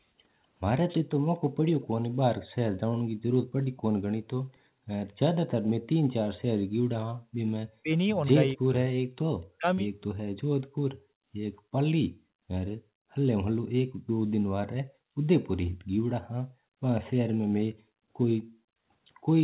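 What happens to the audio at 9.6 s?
Speech suppressed in double talk, from 9.57 to 9.67 s: for about a tenth of a second the speech drops out almost completely, falling by about 40 dB before returning. The likely cause is an echo canceller that heard the far side talking at the same moment, could not tell the local talker apart from the loudspeaker echo, and clamped down on everything, briefly gating this stretch of speech.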